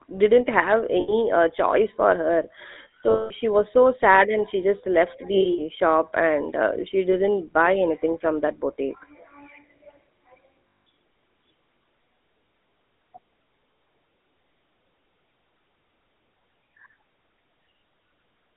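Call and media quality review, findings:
GSM full-rate codec, whole clip: buzzy, gravelly speech in a 250 Hz to 3.7 kHz band, consistent with 13 kbps full-rate GSM. A vocal-tract model is driven by regular pulse excitation at coarse resolution, leaving plainly audible roughness and no high end.

Lost GSM frames at 1.0 to 1.13 s, 80 ms, between "didn't have" and "uh choice for". The decoder repeats the last good frame, producing a brief metallic ring in place of the missing audio.

Lost GSM frames at 3.1 to 3.32 s, 200 ms, just before "she was so sad". This is the longest concealment: the rough, metallic hold hangs on before audio resumes.

Lost GSM frames at 5.34 to 5.61 s: 100 ms of scattered losses across 240 ms, longest run about 70 ms. Several short rough, metallic holds interrupt the audio.

Lost GSM frames at 7.12 to 7.15 s: a 20 ms gap, fitting a single frame. It produces a short metallic blip from the repeated previous frame.

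Lost GSM frames at 10.81 to 10.87 s: 180 ms lost in total. The repeated-frame hold gives a rough, metallic ring.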